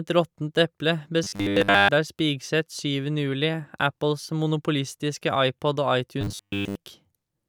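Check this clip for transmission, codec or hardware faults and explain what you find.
Two stretches of robotic sound from repeated short buffers, from 1.24 to 1.89 s, just after "råttent eple", and from 6.21 to 6.75 s. Audio likely arrived too seldom, so a roughly 10 ms slice was looped, over nearly all of the first stretch and most of the second. This forces a rigid, metallic 100 Hz buzz onto the speech.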